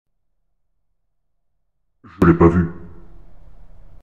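From 0 to 2.22 s the mono sum drops by about 29 dB to a faint residue. The likely cause is one channel inverted, so the shared content cancels. The spectrogram stays nearly empty until 2.22 s.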